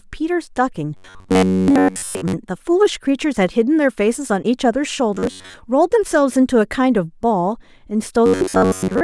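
Robotic sound from repeated short buffers appears at 0.97 to 2.33 s, 5.15 to 5.54 s and 8.26 to 9.03 s. During these stretches most of the speech is replaced by repeats of a fragment of about 10.7 ms, likely because audio was arriving too slowly and the player kept looping what it had. That loop imposes a steady 93.8 Hz buzz, turning the voice metallic and rigid while its rough outline stays audible.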